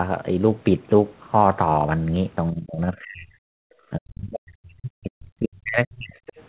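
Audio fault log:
2.51–3.45 s and 3.91–6.16 s, speech suppressed in double talk: the speech sinks sharply and repeatedly, at its deepest by about 40 dB, so it nearly vanishes for about a second in the first stretch and about two seconds in the second. This is likely the echo canceller meeting both sides talking at once. Unable to tell the near talker from loudspeaker echo, it turned the microphone signal down, taking the wanted speech with it.
6.27–6.32 s, other side's voice leaking through: a brief scrap of a second voice slips in for about 50 ms, well beneath the main speech at roughly 25 dB lower. The likely cause is loudspeaker playback of the far end reaching the microphone and surviving echo cancellation. The leaked fragment shares the narrow telephone band of the rest of the audio, with nothing above 4 kHz.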